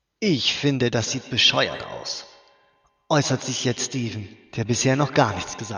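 From 1.0 s through to the end of the speech, a feedback echo between two devices is audible. A second device in the room replays what this microphone sent back into it, outside its echo canceller's reach, so each sound returns roughly a tenth of a second later, peaking about 15 dB below the speech.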